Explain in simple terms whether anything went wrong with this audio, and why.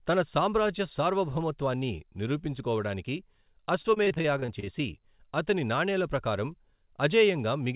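Between 3.82 and 4.68 s the speech turns choppy and robotic. This is repeated packet loss: ten short holes, none longer than 26 ms, were each patched by stretching the sound just before it. Unlike a single dropout, there's no clean silence, just a rapid, robotic stutter. The call line's phone-like sound, with nothing above 4 kHz, is normal for this connection.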